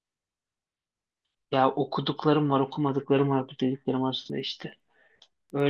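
From 4.3 s to the end, the speech carries a resampler restarted on every block. The 48 kHz to 24 kHz conversion treated each 100 ms block in isolation, so the filter lacked real neighbouring samples at every block edge and left a small error there. That error produces a steady 10 Hz ticking that rides on the signal and vanishes in pauses. Its rigid block-rate spacing and the absence of any missing audio set it apart from dropouts or random clicks.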